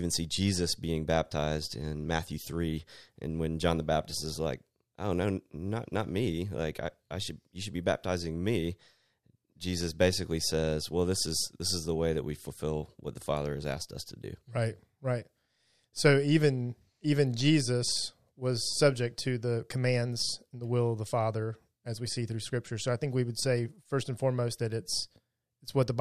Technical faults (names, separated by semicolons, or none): none